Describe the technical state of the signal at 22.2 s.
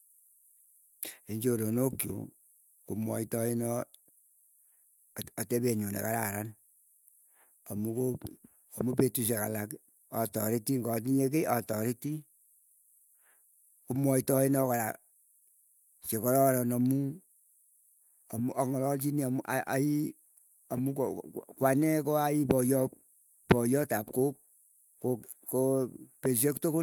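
At 22.2 s the speech signal is intact, with no audible fault at that moment.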